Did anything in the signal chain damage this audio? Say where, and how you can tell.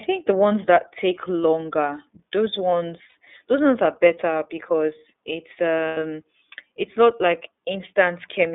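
Yes. The whole thing went through a narrowband codec: the iLBC codec. Nothing gets through below about 250 Hz or above 3.6 kHz, so it's classic phone band. The speech has that slightly rough, synthetic edge you get when the excitation is coded frame by frame on its own, and the damage is plainly audible. The grain and band fit iLBC's 30 ms frame mode at 13.33 kbps.

Then there are two spots of lost iLBC frames on the network side. At 3.09 to 3.15 s there's a 60 ms stretch where the voice turns into a held, faintly buzzy vowel, which fits two missing 30 ms frames. At 5.88 to 5.98 s there's a longer 90 ms one, which fits three frames. That's the decoder repeating the last pitch cycle with noise mixed in. Each time it snaps straight back to normal speech because iLBC frames don't depend on the previous frame.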